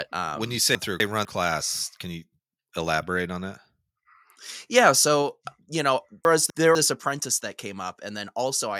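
Right after "um when you um", from 0.75 to 1.25 s, you get chunks out of order: two 250 ms chunks swap places, the later one arriving a chunk late, so the moment before "class can you elaborate" sounds jumbled. The same thing recurs at 6.25 to 6.75 s, just after "you know".

Between 4.77 and 4.88 s the loudest peaks crackle harshly, with their tops shaved off. That's most likely microphone overload: the input was driven about 3 dB past the converter's ceiling, and a small fraction of samples, under one percent, got clipped.

At 5.22 s, right before "you know", the whole level (voice and background together) suddenly drops by about 2 dB. That fits a microphone volume stepped down by the call software reacting to that distorted peak.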